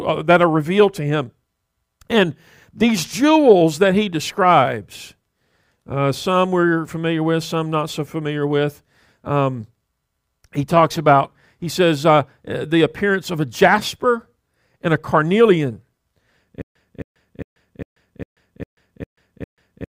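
From 16.62 s to the end, playback likely stalled and kept retrying, replaying its last fragment before running dry. This stutter with silent gaps repeats a 266 ms burst eight times, each followed by 137 ms of digital silence, and the continuing speech is lost.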